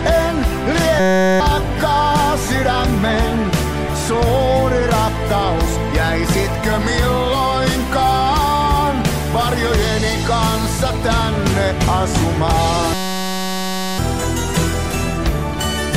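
A system hang loop occurs at 1.00–1.40 s and again at 12.94–13.98 s. The system stalled while playback kept recycling one 5.33 ms slice, which fits a 256-sample buffer. Each time, the result is a steady 188 Hz buzz replacing around 0.4 s, then a full second, of audio.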